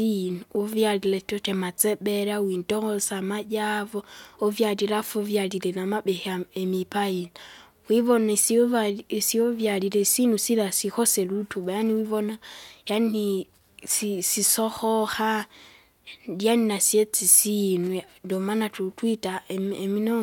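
Speech, and nothing goes wrong with it technically: no glitch, dropout or distortion turns up anywhere along the way.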